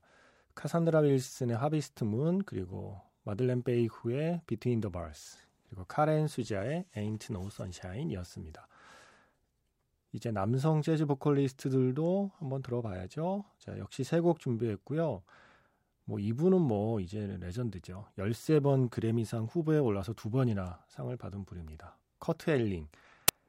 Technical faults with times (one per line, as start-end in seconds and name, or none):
23.28 file tags played as audio